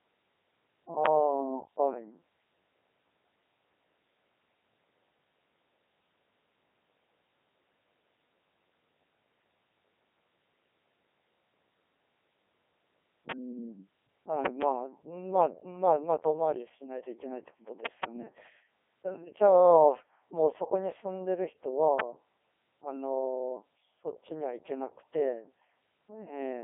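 Throughout, the speech sounds robotic and buzzy, with nothing above about 3.7 kHz. This is the Codec 2 vocoder rebuilding the voice from pitch and envelope alone, heavily damaged, at a rate that suggests 3.2 kbit/s.

From 1.06 to 1.08 s, 13.31 to 13.33 s and 22.00 to 22.02 s come single sharp loud pops, around 25 dB above the speech, which carries on beneath them. Each is likely a voltage step or pulse, from a plug, switch or static, entering the signal.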